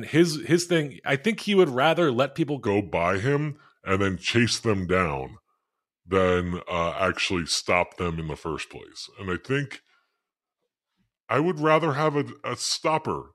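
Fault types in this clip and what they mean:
Section at the wrong speed: from 2.67 s, after "would rather let people", the speech plays at 0.845 times speed, dropping about three semitones, likely a clock mismatch.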